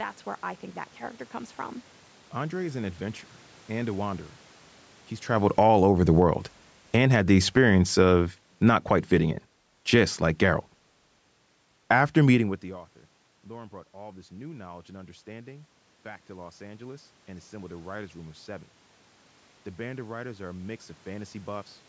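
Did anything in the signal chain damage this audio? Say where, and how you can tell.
Yes. Automatic gain falling, in the call processing stage, runs from 5.38 to 10.24 s. Just after the talker moves near 5 s, the level starts loud. Then speech and room noise sink together by about 11 dB. The gain control judged the input too loud and lowered it gradually.

Automatic gain rising, in the same stage, runs from 13.49 to 21.62 s. The talker moves away near 12.5 s, and the input falls by about 24 dB. The control then raises its gain slowly. Speech and background swell together by about 9 dB over roughly eight seconds.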